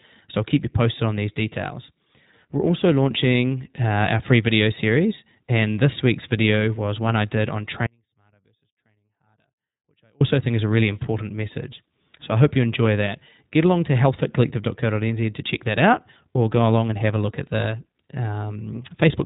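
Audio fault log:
throughout iLBC codec: narrowband VoIP coding in 20 ms frames at 15.2 kbps removes everything above 3.8 kHz, leaving the speech muffled, slightly rough and synthetic.
7.87–10.21 s audio dropout to a faint residue: the signal was lost for 2.34 s, likely from a break upstream, and the speech cuts abruptly to a faint leak about 40 dB down.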